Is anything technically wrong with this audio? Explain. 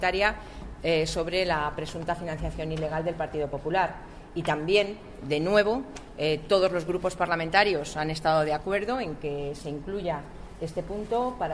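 No, nothing technically wrong can be heard in this audio. There are no technical faults to point to anywhere in it.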